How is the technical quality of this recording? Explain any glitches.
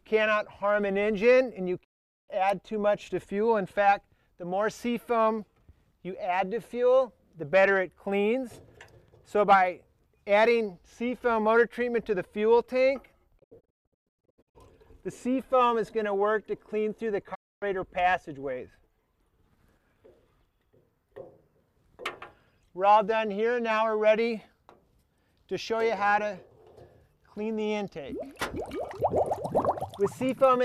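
The recording is marred by three digital broadcast dropouts. The receiver lost valid frames and muted, so the sound fades out within 20 ms and goes silent at 1.83–2.30 s, 13.37–14.57 s (broken into several short holes, the longest 0.14 s) and 17.33–17.64 s.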